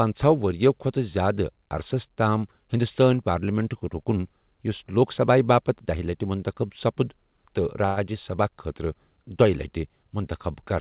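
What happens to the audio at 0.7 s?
Nothing goes wrong at 0.7 s: the speech there is intact, with no dropout, glitch or distortion at that moment.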